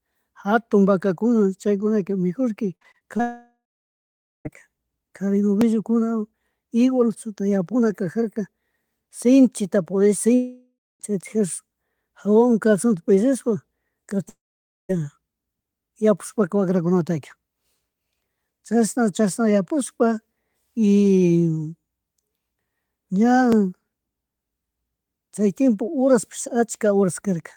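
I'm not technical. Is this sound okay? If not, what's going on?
No. From 2.75 to 3.21 s there is repeated packet loss (robotic sound): small pieces of the speech kept going missing and were patched over, so it sounds choppy and mechanical.

At 3.21 to 4.47 s, 10.35 to 11.02 s and 14.29 to 14.91 s, a long network dropout is the likely cause. The connection stopped delivering audio, so you hear a fading buzz, then silence, and that stretch of speech is simply gone.

At 5.61 s and 23.52 s the likely cause is a dropped buffer (overrun). The computer fell behind and lost roughly a hundredth of a second, which you hear as a small jump in the sound.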